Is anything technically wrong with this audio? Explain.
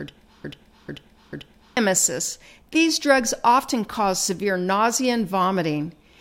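Yes. The speech opens with a broken-record loop already under way at 0.00 s, running until 1.77 s. A fragment of about 0.44 s plays back to back, repeated three times with identical content, before the audio moves on. The likely cause is a player, encoder or stream that stalled and kept resending the last fragment it held. Whatever speech belonged in that first 1.8 s is lost.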